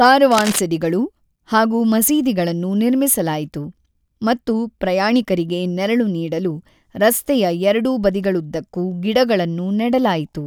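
Right at the top, from about 0.31 to 0.59 s, there's a burst of cable scratch noise: a dense, uneven rustle sitting over the speech, roughly 10 dB below it. What you're hearing is most likely a worn lead, connector or pot being moved, with its contact resistance jumping around quickly and spraying ragged noise into the signal for that quarter-second or so.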